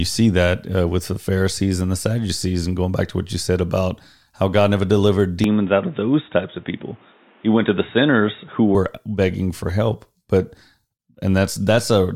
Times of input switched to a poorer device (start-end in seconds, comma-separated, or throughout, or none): 5.44-8.75